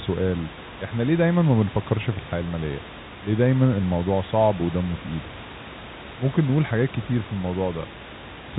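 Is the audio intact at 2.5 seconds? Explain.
Yes, the audio is intact at 2.5 seconds, with nothing there beyond the steady room noise about 15 dB below the speech and the telephone-band limit of the G.711 coding.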